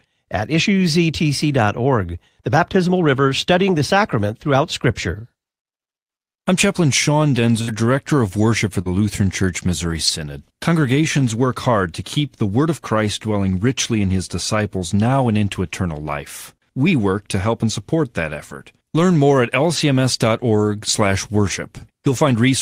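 Speech, roughly 23 seconds long, with packet-loss damage scattered from about 7.6 s to the end. The first and most obvious spot is a burst of packet loss at 7.61 to 7.70 s. For about 60 ms the receiver keeps stretching the last sound it had, fading it down, so you hear a held buzz or fading hiss rather than real audio. Then the talker picks up again with roughly 60 ms of what they said simply gone. Just after that, at 8.82 to 8.87 s, there's a short concealed packet loss. About 40 ms never arrived in time, and the decoder patched it by extending the preceding sound and blending back into the real signal. It comes across as a quick smear or wobble, and a short consonant in there could drop out. The rest is lost packets rebuilt from error correction, each a single 20 ms frame that the decoder filled from a low-bitrate copy carried in the next packet, Opus in-band FEC. There are sixteen of these, from 7.68 s to 22.31 s. 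There's one at the tail of the burst, and a few at 8.08, 8.85 and 10.07 s. They bunch up after "help and support that" at 18.35 and 18.49 s, cluster again around "more at" near 19.1 s, and come thickly from 21.49 to 22.31 s. There's no gap at any of them, just brief patches where the sound turns rougher and noisier.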